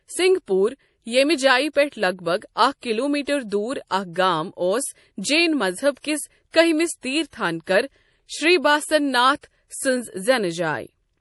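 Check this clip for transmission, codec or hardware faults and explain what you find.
One codec fault runs through the whole clip. MP3 compression is the likely cause. Nothing remains above 11.5 kHz. Weak frequency lines flicker between frames, so the speech sounds watery and swirly, which fits a low bitrate near 48 kbps.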